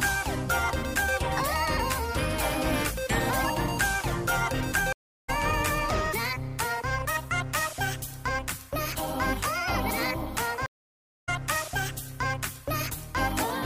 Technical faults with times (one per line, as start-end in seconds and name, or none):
4.93-5.30 stream reconnect
10.66-11.29 stream reconnect